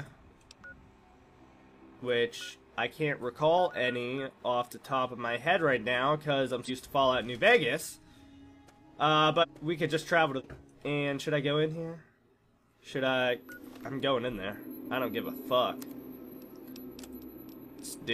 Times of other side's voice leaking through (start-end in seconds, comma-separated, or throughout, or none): none